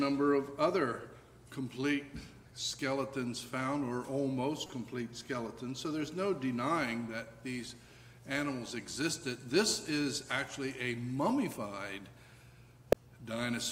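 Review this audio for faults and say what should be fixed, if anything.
Corrupt frame decoded at 4.66–4.72 s (roughly two frames, faint) and 12.92–12.95 s (one frame, loud): flipped bits misplace spectral energy. Add checksums and conceal damaged frames instead of decoding them.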